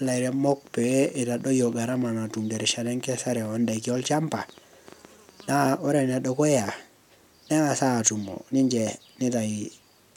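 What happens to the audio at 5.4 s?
At 5.4 s a train of clicks is still running, from 0.06 to 5.63 s. Irregular ticks, about 7.7 per second, reach speech level, likely from electrical interference.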